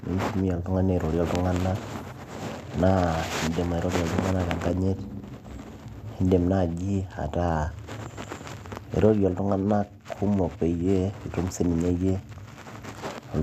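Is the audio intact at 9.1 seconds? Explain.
Yes, at 9.1 seconds the speech plays through intact with no audible fault.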